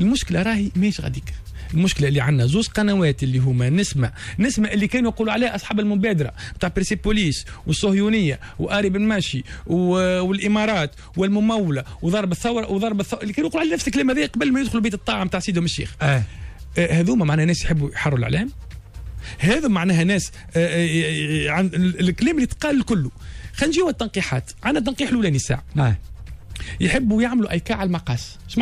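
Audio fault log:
No faults found; nothing audible to log across the clip.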